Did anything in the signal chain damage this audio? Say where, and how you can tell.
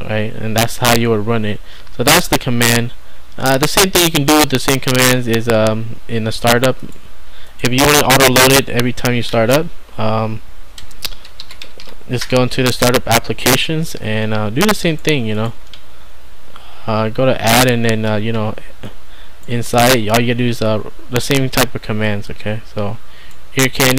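Yes. Integer overflow in a fixed-point gain or sample-format conversion stage damaged the audio throughout. The signal was driven about 8 dB past full scale without limiting, so every sample that exceeded the largest integer value wrapped around to the opposite extreme. Only a small fraction of samples, under one percent, crossed that limit, but each one jumps across the entire range. The result is sudden, violent cracks on the loudest peaks, far harsher than ordinary clipping.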